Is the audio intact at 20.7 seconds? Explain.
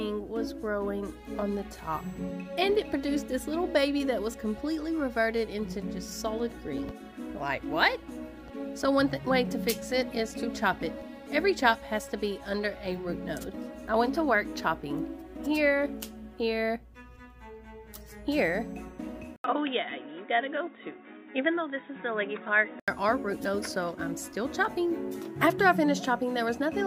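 No. From 19.36 to 22.88 s the input has likely switched to a poorer device with a narrower band. After an 80 ms gap at the switch, nothing above 3.8 kHz comes through, so the sound turns dull and boxy at much the same level, with a faint new background noise.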